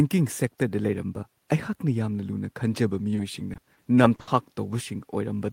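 From 3.15 to 4.29 s the speech turns choppy and robotic, with short pieces missing. This is repeated packet loss: roughly seven holes, the longest 60 ms, are each patched by stretching the preceding sound, so about a quarter of that stretch is filler.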